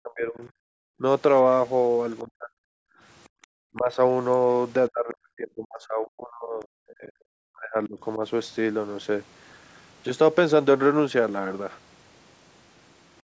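Speech, band-limited by call microphone processing so that nothing reaches above 8 kHz, carries three kinds of echo-canceller fault. The most frequent is speech suppressed in double talk. The talker's own voice sinks from 0.00 to 0.49 s (about 25 dB), 0.99 to 1.03 s (about 15 dB), 2.24 to 2.56 s (about 40 dB), 3.74 to 3.98 s (about 10 dB), and over a long stretch from 4.9 to 8.2 s (about 40 dB at its deepest). This is likely the canceller clamping down while both ends talked at once. It differs from gating because the loss falls on the voice itself, which dips or breaks up mid-speech, rather than on the quiet room between phrases. The other side's voice leaking through appears twice: faintly from 1.36 to 1.58 s at about 40 dB below the speech, and more audibly from 3.24 to 3.79 s at about 25 dB below. It is likely loudspeaker playback that the canceller failed to fully subtract from the microphone. 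Unlike the suppression, it adds sound, a second voice under the main one, instead of taking anything away. Background gated by the echo canceller occurs from 2.84 to 3.42 s, where the room tone drops by as much as about 40 dB for roughly 300 ms in total before returning. The canceller is holding the microphone down while the far end plays. What sets it apart is that the ambience itself goes dead, a sudden vacuum between sounds, while the talker's speech is not the part being cut.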